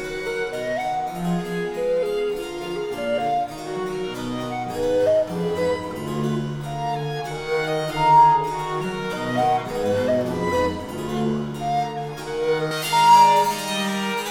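From 12.71 s to the end at 14.31 s, pre-emphasis is left on: treble boosted in the chain is never cut back, so 10 kHz sits about 11 dB above 1 kHz, sounding thin, bright and sibilant.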